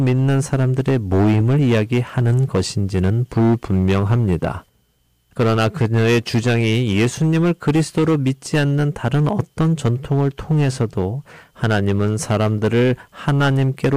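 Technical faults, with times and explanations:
Throughout, hard clipping: harsh fuzz on every loud syllable, because the speech is driven about 12 dB past full scale, flattening roughly a tenth of samples.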